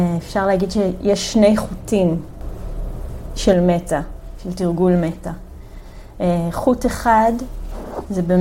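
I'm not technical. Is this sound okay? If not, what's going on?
No. From 2.41 to 3.53 seconds the audio suddenly gets noticeably louder, background noise included, then drops back just as abruptly. This is a sudden gain jump, likely a volume setting switched instantly in the digital signal instead of being faded smoothly.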